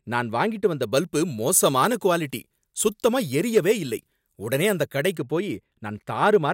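From 0.83 s to 5.18 s the speech has pre-emphasis left on: the treble lift of a 75 µs FM curve was never undone by de-emphasis. Highs sit about 13 dB above 1 kHz at 10 kHz, making the voice thin, glassy and harshly sibilant.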